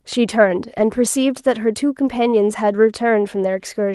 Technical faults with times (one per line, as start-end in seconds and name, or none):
0.73-0.83 lost packet rebuilt from error correction